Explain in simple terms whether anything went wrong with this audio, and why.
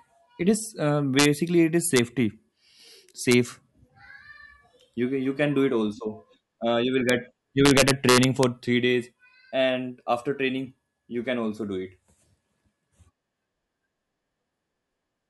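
Integer overflow damages the loud moments of this speech. When the signal peaks past the largest value the digital format can hold, it isn't capped. It wraps around to the opposite extreme, producing harsh cracks far sharper than ordinary clipping. This happens at 1.19–1.25 s, at 1.96–1.99 s just after "it is", at 3.31–3.34 s, at 7.09 s just after "you will", and worst across 7.66–8.43 s, just before "three days and after".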